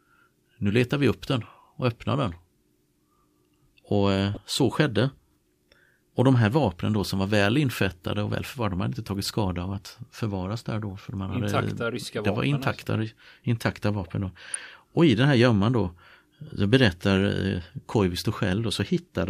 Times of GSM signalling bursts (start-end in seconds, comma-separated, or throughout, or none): none